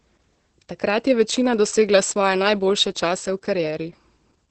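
The whole clip has heavy Opus voice compression: nothing above about 8.6 kHz, and coarse SILK coding leaves speech muffled, hoarse and slightly robotic, which fits roughly 10 kbps.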